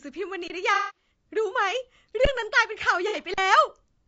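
Speech, carrying plainly audible rough, grainy coloration throughout, with noise between harmonics and a thin, synthetic-sounding top band; this fits low-delay AAC compression, likely AAC-ELD at around 32 kbps, whose short frames resolve pitch harmonics poorly at this bitrate. Underrun with held sample occurs at 0.48–0.50 s (23 ms, which fits a 1024-sample buffer), at 2.25 s (12 ms, fitting a 512-sample buffer) and at 3.34–3.38 s (40 ms): the output flattens to a held level, then resumes with roughly 20, 10 and 40 ms of live audio skipped. AAC frame loss with concealment spans 0.74–1.09 s, with 240 ms lost across 300 ms and a longest run of about 200 ms, so the signal smears, decays toward silence and fades back in. A shorter 60 ms loss at 3.08–3.16 s leaves a brief smeared, noisy patch.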